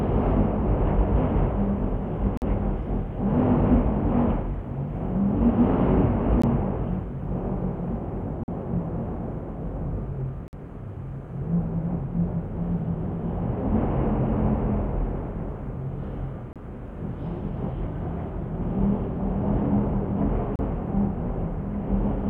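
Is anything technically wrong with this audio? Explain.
Yes. There is a recurring gap between stream segments. Short holes of silence cut into the sound at 2.37–2.42 s, 6.42 s, 8.44–8.48 s, 10.48–10.53 s, 16.53–16.56 s and 20.56–20.59 s. Each lasts between about 16 and 50 ms. They fall on a 2-second grid. At those boundaries, the segment time stamps don't quite meet, so the player fills the space with silence. Each hole has hard edges. Nothing is lost.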